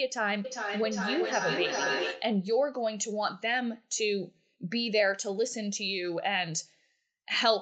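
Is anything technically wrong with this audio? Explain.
Yes. From 0.45 to 2.4 s there is feedback echo between two devices. A nearby device replays the call, its microphone recaptures it, and neither echo canceller catches the other's sound. The speech returns about every 0.4 s, thinner and ringing, at about 2 dB below the original. Room reverberation would smear smoothly rather than repeating at a fixed interval.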